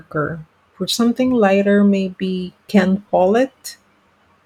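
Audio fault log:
No faults are audible anywhere in this speech recording.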